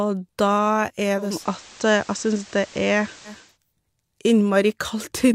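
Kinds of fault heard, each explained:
Digital radio blending to analogue: from 1.14 to 3.58 s the receiver cross-fades over about 0.34 s to FM, so the speech gains hiss roughly 25 dB down at unchanged level. Gradual fades, not abrupt switches, distinguish it from codec changes.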